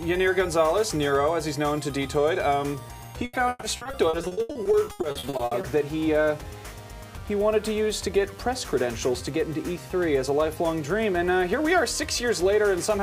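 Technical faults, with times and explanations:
3.25–5.65 s, repeated packet loss (robotic sound): Over this 2.4-second stretch the audio breaks up into a rapid run of about twenty short dropouts. Each hole is patched by stretching out the sound just before it, and the next hole arrives soon after. Together the patches cover roughly 0.94 s, about 39% of the span. The longest single gap lasts 140 ms. The result is choppy and stuttering, with pieces of the sound missing.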